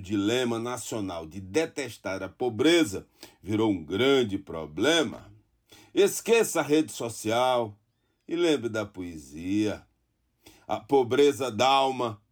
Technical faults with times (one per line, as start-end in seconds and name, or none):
5.13-5.20 loose connector crackle